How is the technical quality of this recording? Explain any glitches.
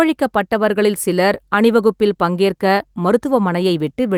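No glitches turn up anywhere in this speech recording. There is nothing in it that calls for a technical explanation.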